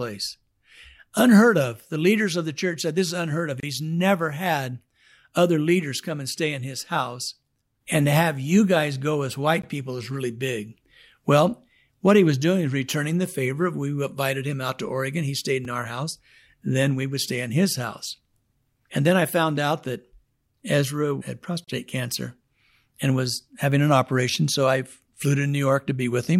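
At 3.60 to 3.63 s, just after "is unheard of", a hard-edged hole of about 28 ms cuts into the speech: a gap between stream segments, where the next segment's timestamps start slightly late and the player pads the difference with silence. Shorter dropouts follow at 9.62 s, between "you guys go as" and "people is really big", and at 15.65 s, before "in our house". A 34 ms gap follows at 21.64 to 21.68 s. The roughly 6-second spacing points to 6-second segments. Nothing is removed; time is inserted.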